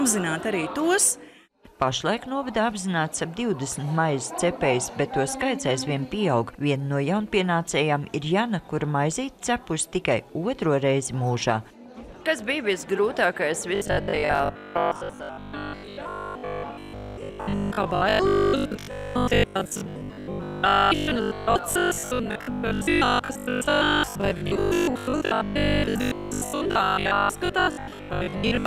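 From 13.75 s to 28.65 s the sound turns into a rigid, metallic buzz at 50 Hz: robotic sound from repeated short buffers. Audio likely arrives too seldom, so about 70 percent is filled by replaying the last 20 ms, skipping real audio.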